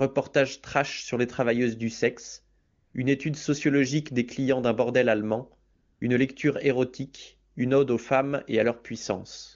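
In this speech clip over an AMR-WB (HD Voice) call, which sounds clean at what seems its top rate, the background twice drops into a smooth, steady hiss: from 2.59 to 2.93 s, after "les travailleuses du sexe", and from 5.73 to 6.01 s, after "clients d'un bordel allemand". This is AMR comfort noise, where the phone stopped sending speech frames in those pauses and the receiver substituted synthetic noise.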